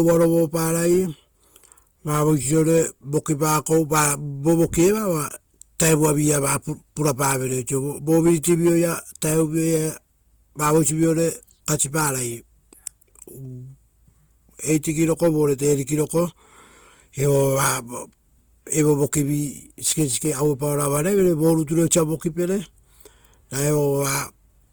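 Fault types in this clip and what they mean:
Opus compression: the speech sounds grainy and rough throughout, with a noisy grit on it, likely from Opus running in its music (CELT) mode at a low rate, which fits about 24 kbps. Bandwidth stays full up to 20.1 kHz, so it's gritty, not muffled.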